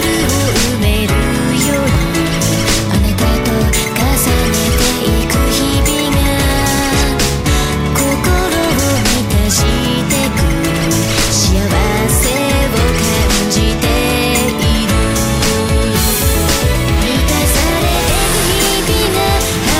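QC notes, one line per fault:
1.95 s: chunks out of order. A 5.8 ms block of audio plays one chunk late, after the chunk that should follow it. Nothing is lost, but the swapped sequence creates three hard joins where the waveform jumps discontinuously, heard as a tiny jumbled flicker in the sound, typical of a late buffer write or delivery being played in arrival order.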